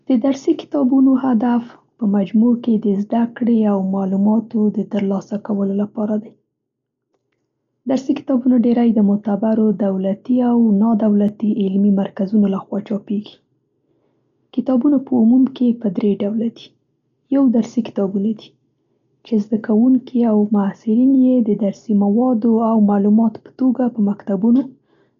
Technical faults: Dolby Digital compression; dropped samples

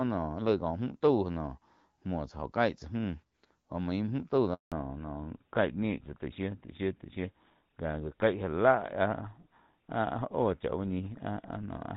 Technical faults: handover gap; fallback to narrowband

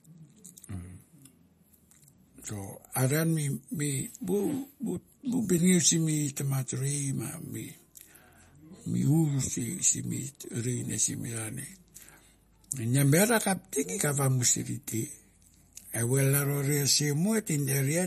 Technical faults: MP3 compression

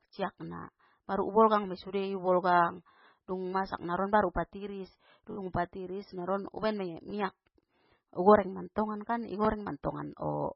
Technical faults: MP3 compression; repeated buffer

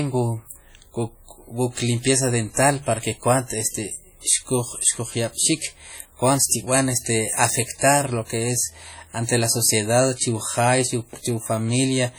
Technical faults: WMA compression

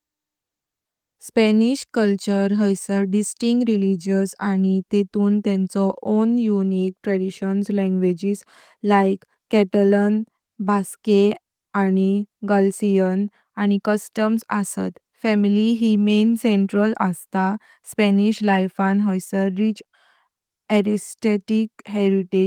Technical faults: none

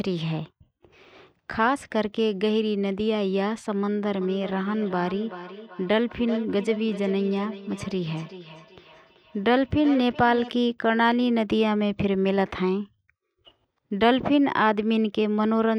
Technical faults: feedback echo between two devices

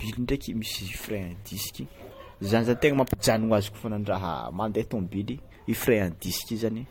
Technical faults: none

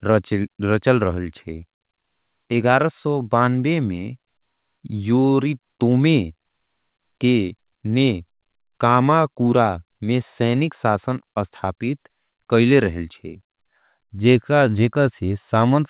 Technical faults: none

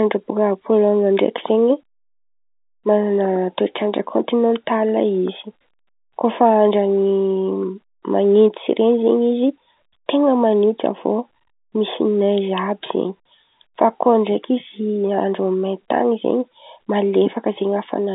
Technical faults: none

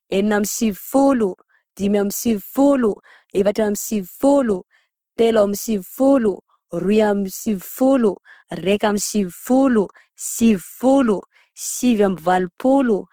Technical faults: Opus compression

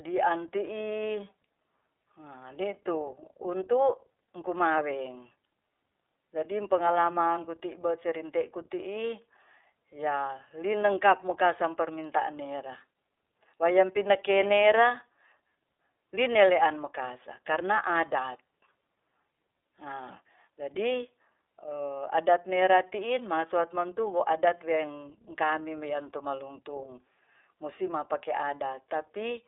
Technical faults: iLBC codec

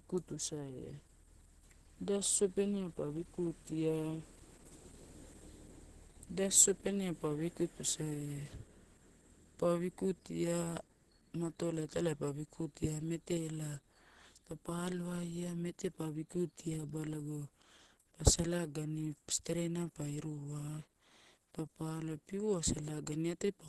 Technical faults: Opus compression

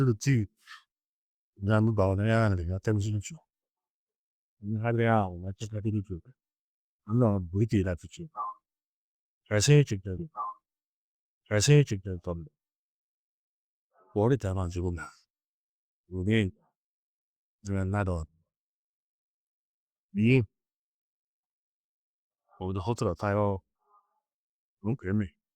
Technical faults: stream segment repeated

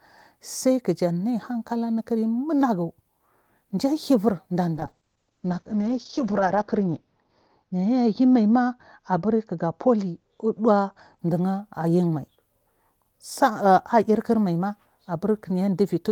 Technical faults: call bitrate drop

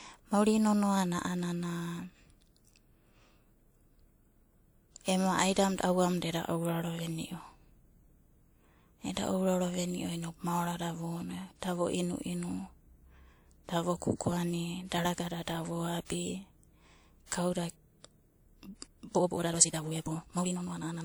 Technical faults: pre-echo; time-stretched section

